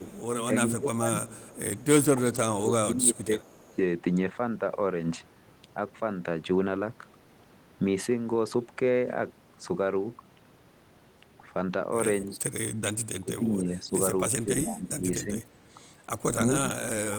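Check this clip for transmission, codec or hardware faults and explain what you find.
Yes, two call-path faults are audible.

Echo leak at 0.0–0.22 s, 1.29–1.84 s and 3.39–3.76 s: a faint copy of the speech trails by 274 ms, about 25 to 30 dB down, likely residual loudspeaker echo the canceller missed.

Speech suppressed in double talk at 0.51–1.38 s, 2.18–3.78 s, 12.26–12.45 s, 13.2–15.45 s and 16.37 s to the end: speech dips by roughly 15 to 25 dB in pieces, likely the echo canceller attenuating both talkers during overlap.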